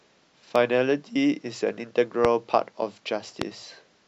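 Speech marred by three loud pops, at 0.56–0.58 s (about 10 dB above the signal), 2.25–2.27 s and 3.42–3.44 s (about 20 dB), likely electrical glitches. Each appears as a narrow waveform spike and a vertical broadband stripe on a spectrogram.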